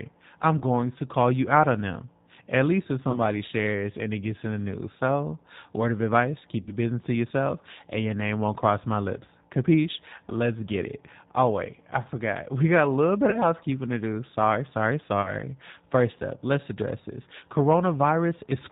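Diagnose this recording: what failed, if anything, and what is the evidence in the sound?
The codec stage is at fault throughout. The speech is band-limited, with nothing above 4 kHz, and has the slightly rough, synthetic texture of G.729 (the G.729A variant), with plainly audible damage. The character fits an 8 kbit/s link. The decoder rebuilds each 10 ms frame from a vocal tract filter, a pitch predictor and a few pulses, so fine detail and breathiness are lost and replaced by a buzzy approximation.

The network stage shows VoIP packet loss concealed by the speech codec at five points. The first is at 0.58 to 0.62 s, just before "going to call you". The second is at 3.11 to 3.19 s, between "least if" and "shares and it gets". The third, at 6.61 to 6.75 s, lost the most audio. The fourth is at 13.30 to 13.39 s, between "got a little bit" and "housekeeping to do", and the fifth is at 15.22 to 15.36 s. 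About 30 ms went missing at each point, and 60 ms at 6.61 s. The decoder filled each gap by extending its last pitch and filter at falling gain, which gives a brief smear of buzzy tone or coloured noise. Because each frame depends on the one before, the sound stays weak for a moment after packets resume.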